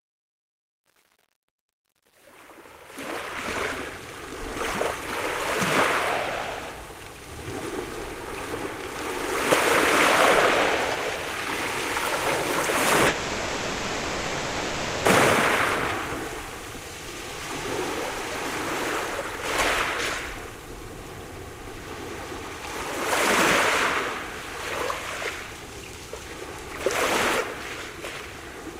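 Truncation distortion on the fade runs from 0.0 to 3.64 s, across the clip's opening fade. The gain ramp itself is smooth, but the fading stage keeps only about 9 bits and adds no dither. While the level is low, the waveform is reduced to a few coarse square steps, and that damage is worst up to 3.42 s. The quietest part of the fade therefore sounds gritty before the sound clears.

A call audio freeze follows from 13.07 to 15.07 s. For 1.98 s the receiver stretches the last bit of sound into a fading buzz or hiss instead of letting it drop to silence. The likely cause is packets held up in transit until the jitter buffer ran dry. Nothing is lost: when the packets arrive, playback picks up exactly where it stopped. The pause simply delays everything after it by 1.98 s.

A skip ahead occurs between 27.39 and 27.42 s. Roughly 0.4 s of sound is dropped while later audio was already queued. 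Only about 10 ms of fill bridges the cut, so the material before and after it is joined almost directly. The result is an abrupt forward jump with a chunk of the sound missing, and it pulls the accumulated delay back by about the same 0.4 s.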